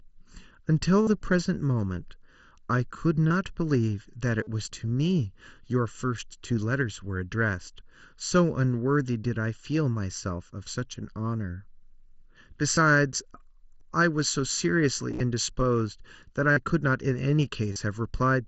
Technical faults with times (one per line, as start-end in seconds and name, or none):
0.00-18.48 channel delay (comb filtering)
1.02-1.07 concealed Bluetooth headset packet loss
3.28-3.30 concealed Bluetooth headset packet loss
4.43-4.47 concealed Bluetooth headset packet loss
12.75 concealed Bluetooth headset packet loss
13.80 concealed Bluetooth headset packet loss
15.11-15.20 concealed Bluetooth headset packet loss
16.52-16.57 concealed Bluetooth headset packet loss
17.73-17.76 concealed Bluetooth headset packet loss